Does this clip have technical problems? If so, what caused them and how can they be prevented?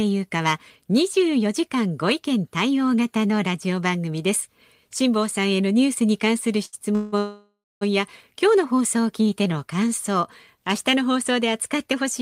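Yes. There are three kinds of fault, all in the second half of this speech clip.

The first is a short stall from a late packet, from 6.65 to 6.75 s. A packet did not arrive in time and the jitter buffer ran empty. The receiver held the last sound for about 73 ms until the packet came. Playback then resumed from the same point, so nothing is lost, but the sound is drawn out and everything after it is 73 ms late. A larger jitter buffer margin or a more stable network path would prevent it.

Two call audio freezes follow. The first runs from 6.95 to 7.14 s. The receiver filled 171 ms by continuing the last sound, with no silence. The second runs from 7.18 to 7.83 s. It fills 629 ms, and the continuation fades into about 220 ms of silence before the sound returns. The likely cause is packets held up in transit until the jitter buffer emptied. The sound picks up where it stopped, so nothing is missing, but gaps totalling 800 ms have been inserted. 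Fixing congestion or Wi-Fi drops on the route, and prioritising voice traffic, would prevent these.

The last is a jitter buffer slow-down, from 9.22 to 9.54 s. The buffer needed to rebuild its reserve. The receiver repeated single pitch periods or small pieces of pauses, adding 42 ms. The speech plays at about 89% speed over that stretch but keeps the same pitch, so sounds are stretched. A steadier network, so the buffer does not run low, would prevent it.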